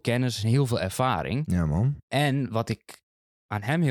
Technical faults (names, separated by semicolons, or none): none